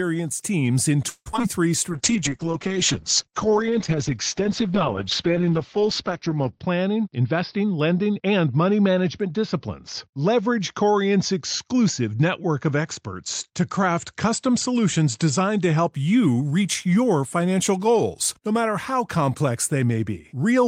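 Repeated packet loss (robotic sound) runs from 1.09 to 1.45 s, just after "teams in". Five gaps open in quick succession, the longest 164 ms, and over half the stretch is patched by stretching the preceding sound. Pieces go missing and what remains turns choppy.

Jitter buffer slow-down follows from 1.89 to 3.52 s. Short segments are repeated many times to build up a reserve, adding 107 ms. The speech runs at 94% speed at unchanged pitch, so syllables sound drawn out.

A call bitrate drop starts at 1.92 s and lasts until 15.98 s, just before "you reach your financial". The coarser coding fits a fall from about 32 to 8 kbps, with the lowest rate held for 4.6 s. Audio bandwidth shrinks from 20 kHz to 6 kHz, so the speech sounds muffled and rough.

Jitter buffer speed-up, within that stretch from 6.99 to 8.54 s, trims around 150 ms of excess buffered audio by removing short pitch-period pieces again and again. 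Speech runs at 111% speed at the same pitch and sounds hurried.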